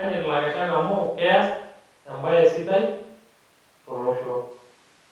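No technical faults audible.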